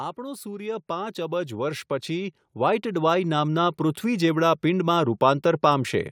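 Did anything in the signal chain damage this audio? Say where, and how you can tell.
Yes. Automatic gain rising in the call processing stage: from 0.15 to 4.32 s, speech and background noise swell together by about 14 dB. The waveform envelope ramps steadily upward and the spectrogram brightens uniformly, noise floor included, because the gain control kept raising its level.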